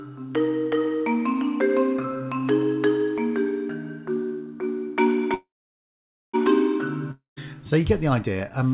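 At 5.34 s there's a call audio freeze lasting until 6.35 s: a brief fading buzz, then roughly 0.87 s of silence. It's likely stalled packets draining the jitter buffer, and nothing's lost afterward.

At 7.11 s a long network dropout hits, lasting to 7.38 s. A short fading tail gives way to silence, and about 0.26 s of audio never comes back.

Everything's capped at 4 kHz, which fits a G.711 call path.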